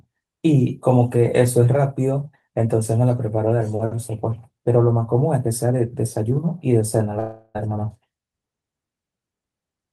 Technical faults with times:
7.19-7.56 long network dropout

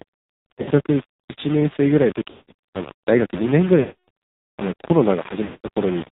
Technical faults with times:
0.00-6.16 low bit depth without dither
0.00-6.16 AMR narrowband mobile codec
0.52-0.70 lost AMR speech frames
2.30-2.53 lost AMR speech frames
3.80-4.09 lost AMR speech frames
5.44-5.69 lost AMR speech frames

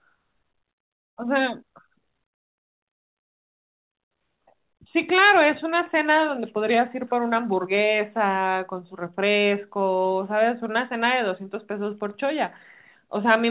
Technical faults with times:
7.34-8.42 scattered short gaps

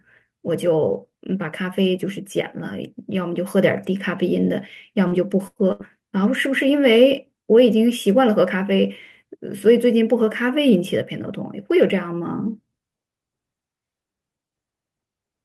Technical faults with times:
5.07-5.14 short concealed packet loss
5.47-5.82 burst of packet loss

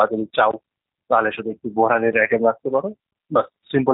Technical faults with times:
0.00-3.94 G.729 codec
0.51-0.53 block of digital silence
2.12 block of digital silence

